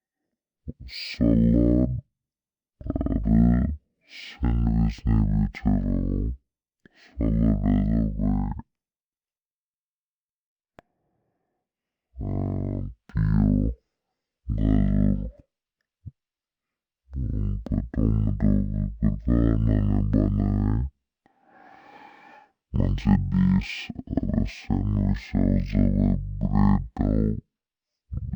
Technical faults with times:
0.00-28.35 stereo read as mono

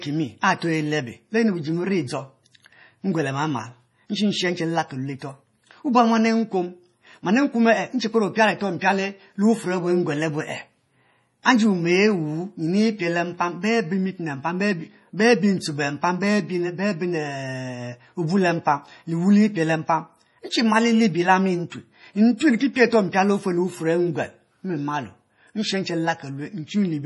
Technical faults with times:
0.00-27.05 MP3 compression
0.41 pre-echo
11.43-11.45 pre-echo

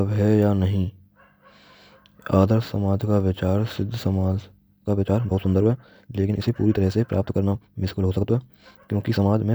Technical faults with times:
4.74-9.54 time-stretched section

